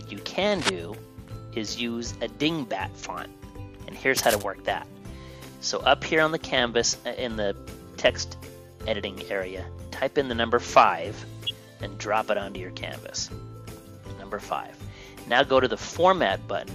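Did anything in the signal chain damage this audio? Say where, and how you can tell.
Yes. Scratchy, rustling bursts at 0.50 to 0.70 s and 4.17 to 4.44 s point to analogue wiring, likely cable scratch noise from a worn contact.

A brief glitch at 11.46 to 11.51 s is a corrupt frame decoded: a single damaged codec frame played anyway, misplacing energy across frequencies.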